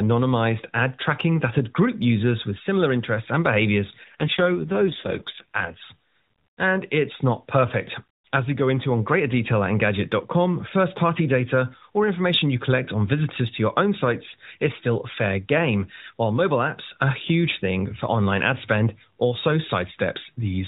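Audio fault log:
4.04 to 5.81 s, AMR rate drop: Just after "similar interests and behaviors" this speech turns rougher and buzzier, with a synthetic edge, while the narrowband mobile-codec bandwidth stays fixed and no gap opens. The codec has fallen to a lower mode, which fits a step from 12.2 kbps down to 4.75 kbps. Fewer bits leave a coarser vocal-tract model and sparser excitation pulses, so detail is lost until the higher rate returns.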